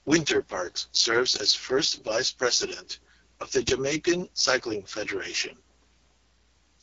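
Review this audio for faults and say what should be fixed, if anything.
The speech carries AMR wideband (HD Voice) codec damage throughout, with a heavily rough, raspy texture that fits the codec's lowest 6.6 kbit/s mode. A spectrogram shows smeared harmonics, with noise-filled bands replacing detail and nothing above 7.4 kHz. Encoding at 12.65 kbit/s or higher would prevent this.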